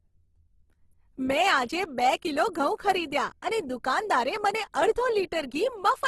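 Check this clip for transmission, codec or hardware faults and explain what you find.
There's one codec problem, and it runs through the whole speech clip. It's Opus compression, most likely the music (CELT) mode at a low bitrate, around 16 kbps judging by the damage. With too few bits, bands get filled with folded or noise content, so the voice turns grainy and rough. There's nothing above 12.2 kHz either.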